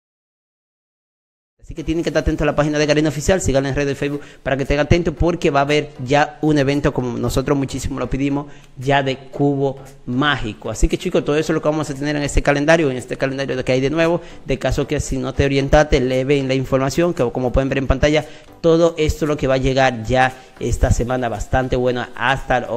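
Nothing here is a technical fault: the audio fades in gently from around one and a half seconds to 2.18 s, just as an editor would shape an opening, and after that there's nothing amiss to point out.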